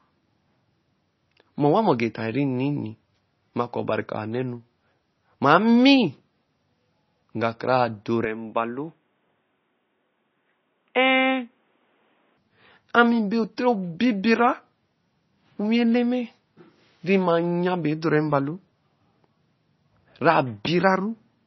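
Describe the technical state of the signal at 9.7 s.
At 9.7 s you're in the middle of a stretch, from 8.25 to 12.38 s, where the input was likely switched to a poorer device. There's no gap at the changeover. The speech just turns dull and boxy, with nothing left above 3.8 kHz. It drops about 5 dB in level and brings a new, faint noise floor sitting roughly 45 dB under the speech. That fits a cheaper mic or a headset call profile taking over, with its own narrow band and tone.

On top of that, the whole clip carries heavy damage that's most likely MP3 compression, and it's just as present at this moment. The treble is cut off hard at 5.9 kHz, which fits a starved bitrate around 24 kbps. Weak frequency lines get zeroed and flicker in and out from frame to frame, so the speech sounds watery and swirly, with chirpy sibilants and smeared attacks. Inside the switched span the narrower 3.8 kHz band sits under that cut-off.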